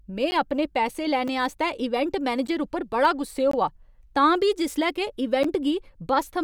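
Five times in this speech the output briefly stopped delivering samples and left zeros, producing blocks of digital silence. These fall at 0.31 s (10 ms), 1.28 s (under 4 ms), 2.47 s (10 ms), 3.51 to 3.53 s (20 ms) and 5.43 s (10 ms). Each cut to zero and back is abrupt, with no fade, so the shorter gaps come across as sharp ticks. The 20 ms gap at 3.51 s is long enough to register as a tiny hole in the speech.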